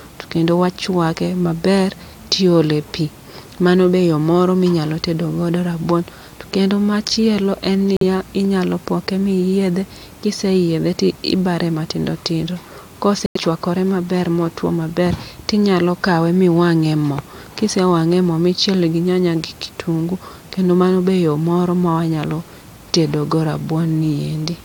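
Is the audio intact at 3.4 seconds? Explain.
Yes, at 3.4 seconds the speech plays through cleanly, with no dropout, click, distortion or other fault to be heard at that moment.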